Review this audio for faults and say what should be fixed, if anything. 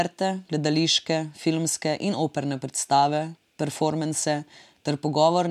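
Nothing in the speech signal calls for a fix, since no technical fault can be heard anywhere in the recording.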